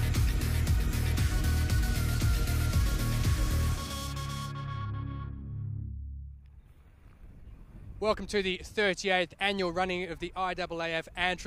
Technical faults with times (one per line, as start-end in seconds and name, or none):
none